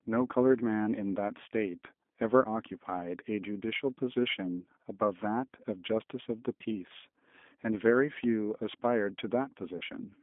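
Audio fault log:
throughout: G.729 codec. The speech sounds plainly rough and slightly synthetic, confined to a telephone band of about 200 Hz to 3.5 kHz, with nothing bright or airy above it. This fits an 8 kbit/s G.729A codec, which does not send the waveform itself. It sends a vocal tract filter, a pitch predictor and a few pulses for each 10 ms frame, so the decoder rebuilds an approximation whose texture is coarse and buzzy.
9.77–9.84 s: VoIP packet loss concealed by the speech codec. Near the end, about 40 ms of audio is missing. In its place the sound smears into a short, fading extension of the last sound, and the sound just after it stays weak or distorted. The decoder filled the gap, which fits two lost packets, by repeating its last pitch and filter settings at falling gain. Because each frame builds on the previous one, the damage carries past the moment real packets resume.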